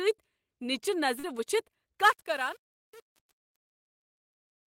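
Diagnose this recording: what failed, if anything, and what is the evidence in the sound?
A brief smear at 1.19 to 1.25 s is short concealed packet loss on the network: about 40 ms never arrived, and the decoder extrapolated the preceding sound to bridge it.

From 2.02 s to the end, the fade-out, starting around 2 s, turns gritty. This is truncation distortion on a fade at the sample-format stage: undithered requantisation to roughly 7 bits steps the quiet tail.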